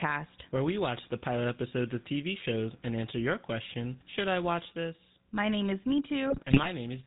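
A speech clip carried through the GSM full-rate codec from start to finish, with a burst of GSM bit errors near the end. The codec damage is plainly audible: nothing survives above 4 kHz, and the voice takes on a buzzy, gravelly edge because the excitation is rebuilt from sparse, regularly spaced pulses. This points to the original 13 kbps full-rate coder. Newer, wider-band codecs tend to sound smeared or metallic instead, and ordinary low-pass filtering dulls the sound without adding that grain. From 6.30 to 6.69 s, right after "name is", the audio breaks into squawks, pops and gargling. Corrupted filter, pitch and gain values are bending the spectrum and throwing the level around frame by frame. This fits roughly 17 damaged frames at a bit error rate around 1.4%. Packet loss would leave gaps or smooth concealment, not these violent, distorted outbursts.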